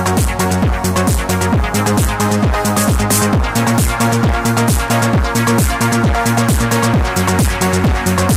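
From 4.01 to 4.91 s, processor overload crackle: the processor repeatedly misses its deadlines, and each missed buffer drops out as a tiny silent gap, about twenty of them, pointing to buffers under a millisecond long. The result is a gritty crackle riding on the sound. The waveform shows scattered hard-edged notches, and the spectrogram shows thin vertical broadband streaks.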